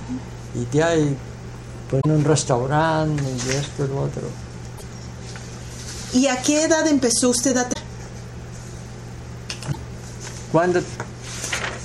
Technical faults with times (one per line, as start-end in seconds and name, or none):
1.97-2.06 damaged data in a compressed stream
4.74-4.82 damaged data in a compressed stream
7.69-7.76 damaged data in a compressed stream
9.68-9.76 damaged data in a compressed stream